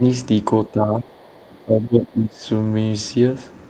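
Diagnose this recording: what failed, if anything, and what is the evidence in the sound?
Call processing fails in three spots. The speech dips by about 5 dB at 0.00–0.04 s, about 10 dB across 0.68–1.32 s, and about 20 dB across 1.65–2.46 s. This is likely speech suppressed in double talk. The echo canceller mistook the talker for echo and ducked it.

The network stage fails once, at 2.63–2.65 s. A 20 ms stretch turns rougher and noisier, but nothing drops out. That points to one lost packet rebuilt from error correction. The decoder played the low-bitrate copy carried in the next packet.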